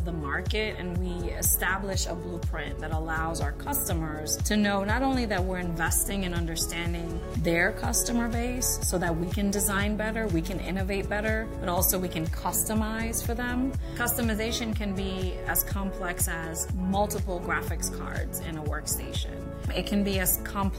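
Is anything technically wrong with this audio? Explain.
No, nothing technically wrong stood out on listening to this audio.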